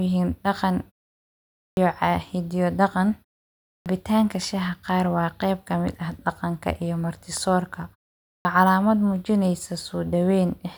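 Speech clip with a clipped start after a pause, three times: at 1.67 s, 3.76 s and 8.36 s, roughly 100 ms, 98 ms and 90 ms of sound simply vanish, so the speech snaps in out of silence missing its opening. Each follows a gap of about half a second to 0.84 s, long enough for the output device to doze off and need a moment to wake and lock again.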